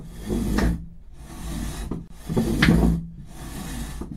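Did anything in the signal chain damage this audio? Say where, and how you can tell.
Yes. At the codec stage, at 2.08 s to 2.10 s, a gap at a join of encoded pieces opens a gap of about 28 ms in otherwise continuous sound, with smeared edges, before the sound resumes where it stopped. Separately encoded segments were concatenated without trimming encoder delay and final-frame padding.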